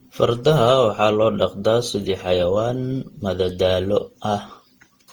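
Throughout the speech, generation loss gives a swirly, hollow, smeared sound with blurred attacks, likely from around ten repeated Opus passes near 48 kbit/s, worse than one encode would leave.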